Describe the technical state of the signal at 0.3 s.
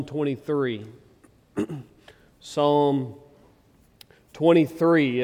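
At 0.3 s the signal is intact, with no dropout, clipping, glitch or other fault to be heard at that moment.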